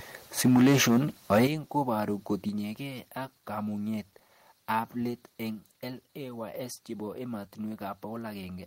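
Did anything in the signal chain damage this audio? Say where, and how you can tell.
Yes. Microphone overload at the converter, 0.4 to 0.98 s (about 8 dB over, roughly 15% of samples flattened) and 1.31 to 1.47 s (about 6 dB over). The crackle comes from flat-topped peaks, not codec smearing. Likely cause: input gain set too high.

Microphone volume stepped down in call processing at 0.48, 1.47 and 2.49 s, dropping about 2, 8 and 4 dB in single steps, likely from the software cutting input gain after clipping rather than a gradual compressor ramp.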